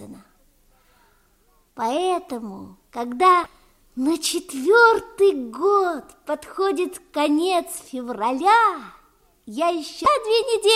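Damaged data in a compressed stream appears twice, from 3.43 to 3.46 s and from 10.03 to 10.06 s. Corrupted bytes leave the decoder unable to read those frames until it regains sync, and each gives a 30 ms blip cutting through the sound.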